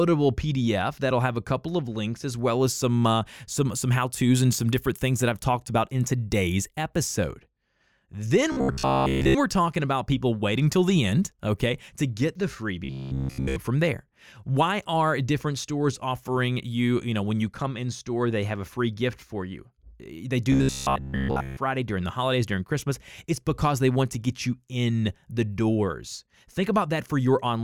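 Speech with robotic sound from repeated short buffers at 8.52–9.35 s, 12.84–13.56 s and 20.52–21.57 s. A rigid metallic buzz at 66.8 Hz runs through the voice. It likely comes from a roughly 15 ms buffer being replayed, wholly in the first two spans and mostly in the last.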